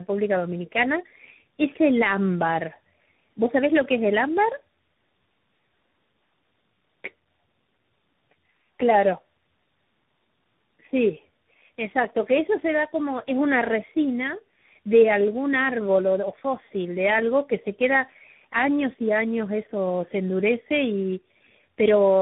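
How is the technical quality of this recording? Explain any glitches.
The quality is poor throughout the 22-second recording because of tandem speech coding. The speech sounds rough, muffled and warbly for its whole length, with nothing above about 3.8 kHz. The coloration suggests three separate speech coders in a row. The first was a very low-rate one, probably around 6.3 kbit/s like G.723.1, then something like AMR-NB, and finally a CVSD-style delta modulator. Between them were plain telephone-band links. At each border the signal was decoded and coded again. Every coder reworked the previous one's errors, so the smearing and wobble build up beyond what any single coder would produce.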